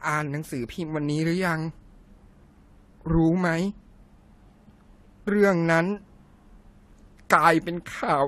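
Throughout, the speech carries layered coding artefacts, likely from transcoding between lossy codecs. Unlike a single pass, two distinct smearing textures stack, and nothing survives above 15.2 kHz.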